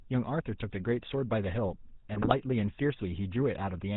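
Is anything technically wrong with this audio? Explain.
Yes, two faults are audible.

GSM full-rate codec, throughout: the whole recording carries the signature of the original GSM speech codec, which fits its 13 kbps rate. It rebuilds the voice from a vocal-tract filter fed by a thinned, regularly spaced pulse excitation, and discards everything above 4 kHz. The damage is plainly audible: the speech sounds dull and band-limited, with a buzzy, gravelly roughness laid over every syllable.

GSM bit errors, from 2.14 to 2.33 s: for roughly a fifth of a second the decoder receives corrupted data, consistent with a bit error rate around 4 percent on a poor radio link. Wrong filter, pitch and gain values distort the spectrum and throw the level around from frame to frame, which suggests several consecutive frames were hit. The speech breaks into squawks, pops and gargling before recovering.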